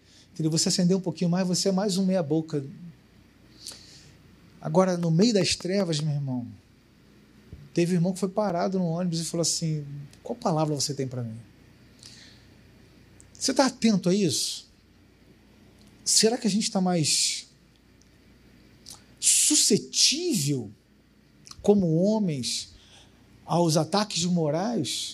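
A regular ticking runs through the audio from 5.03 to 6.0 s, about seven sharp clicks at 5.2 per second standing a few decibels above the sound. This train of clicks is likely interference from nearby equipment or a faulty connection or power supply. At 8.50 s a brief tick marks a 5 ms block of digital silence, where the sound cut out, probably from an output buffer that wasn't filled in time.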